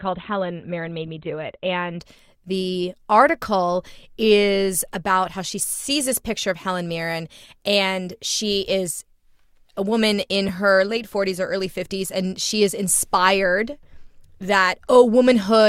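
Adaptive stream starting at a low bitrate, 0 to 2.0 s: dull, artefact-heavy speech, consistent with roughly 16 kbit/s Opus, jumps cleanly to fuller quality, like 64 kbit/s, at "the article is about".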